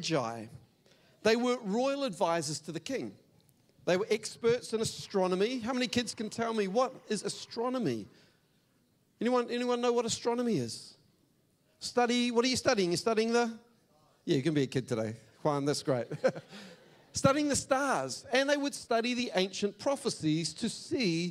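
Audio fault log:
5.00–7.66 s, timecode bleed: a faint warble alternating near 1 kHz and 2 kHz, roughly 35 dB down, from square-wave code leaking in; its rhythm suggests 25 fps.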